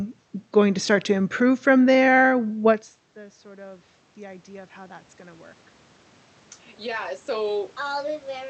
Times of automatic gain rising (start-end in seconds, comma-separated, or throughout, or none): 3.14-5.51